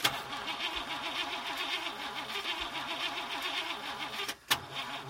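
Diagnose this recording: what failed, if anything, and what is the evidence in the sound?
A train of clicks runs from 0.09 to 0.91 s: around fifteen near-identical pulses at about 16 per second, unevenly spaced and well above the surrounding sound. This is likely interference coupling into the analogue wiring, or a struggling interface injecting the same pulse repeatedly.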